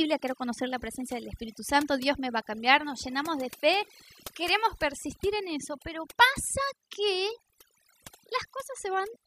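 Overdone noise removal runs throughout: the reduction was set too strong, cutting bands near the noise estimate, leaving twinkling near-silence.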